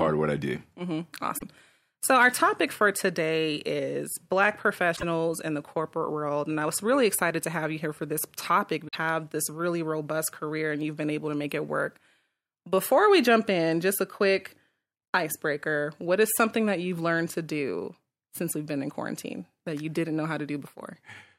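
At 1.35–1.43, 4.93–5.03 and 8.84–8.95 s you get short chirps, squawks, clicks or holes from damaged data in the compressed stream: the decoder misreads corrupted frames and loses sync.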